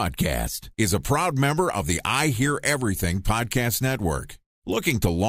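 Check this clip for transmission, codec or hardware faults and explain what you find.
No faults can be heard anywhere in the speech signal, which stays continuous and stable throughout.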